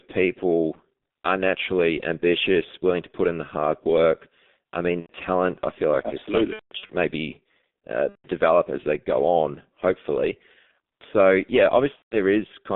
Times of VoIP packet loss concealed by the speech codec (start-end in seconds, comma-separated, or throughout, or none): 5.00-5.11, 6.53-6.95, 8.09-8.28, 11.96-12.17